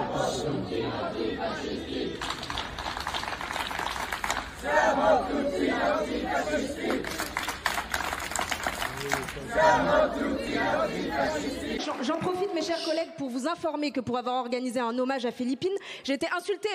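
The audio has one fault, a block of digital silence at 10.47 s. The sound drops out for about 1.45 ms and then returns. There is no fade at either edge. A gap this short does not come across as silence. It is heard as a tick or a brief dip. The length fits a 64-sample block of zeros. Either the output buffer was not filled in time, or a calculation produced invalid values that were replaced with zeros.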